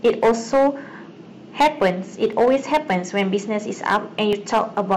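From the first syllable to the last, the speech shows hard clipping. The level going into some stage was about 10 dB more than it could carry, so the loudest peaks were sheared flat, and a few percent of samples were pushed past that limit. The waveform shows squared-off plateaus on the loudest peaks. On a spectrogram, those moments sprout dense vertical smears of harmonics reaching into the high kHz range. The ear hears a gritty, buzzing harshness on each emphatic sound.

At 2.33 s there is an overlap between stream segments. Two consecutive blocks claimed the same stretch of time, so the player discarded about 40 ms of audio that was never actually duplicated. The waveform jumps abruptly to a new value at the splice, and a spectrogram shows a thin broadband vertical line plus a slight gap in the speech's continuity. It comes across as a tiny hiccup in the flow.

The same fault returns at 4.33 s, this time removing about 30 ms. 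The two events sit 2 s apart, which matches a segment length of 2 s, so each cut falls at a segment boundary. Once again there is a visible discontinuity in the waveform and a brief broadband tick on the spectrogram, heard as a small skip.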